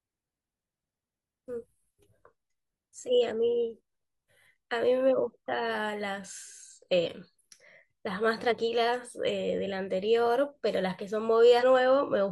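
Speech that jumps forward at 1.6, 7.02, 8.47 and 11.58 s, each losing roughly a tenth to a fifth of a second. These are compressed frames skipped, whole frames of about 43 ms each left unplayed.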